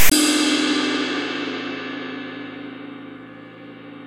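File tags played as audio open the clip, from 0.0 to 0.12 s. A block of text metadata was decoded as sample values, giving a loud, lopsided rasp with hard edges, followed by the tag's zero padding reproduced as dead silence before the everyday sound begins.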